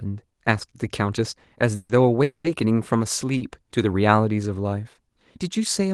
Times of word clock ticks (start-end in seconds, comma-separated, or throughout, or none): none